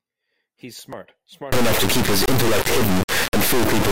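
From 1.52 s to the end, the speech turns into an extremely loud, buzzing square wave. This is integer read as float. The sound fits 32-bit integer samples being interpreted as 32-bit float values. Most bit patterns then decode as numbers either near zero or far beyond full scale, so the output slams between silence and the clipping limit. It differs from ordinary overload clipping, where the flattened speech stays recognisable. Here it vanishes into hard buzz.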